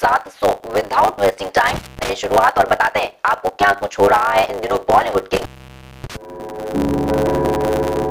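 Right from the start there's a steady 100 Hz buzz running under everything, and the whole thing moves a touch quick, about 1.09 times normal speed, yet the timbre stays the same. That's a block size mismatch, truncated: one stage is handing over bigger blocks than the next one reads, so the tail of every block gets dropped. Those chop points land 100 times a second, which is your buzz, and the missing slices are why it runs fast.

Then at 1.68 s you get an intermittent contact, a loose cable or plug opening up. The sound drops out with a crackle on either edge, stays open for about 223 ms with just faint hiss underneath, and it's back by 2.09 s. It does it again from 5.33 s to 6.16 s, a longer break this time, about 638 ms open, with the same crackly edges and hiss in the gap.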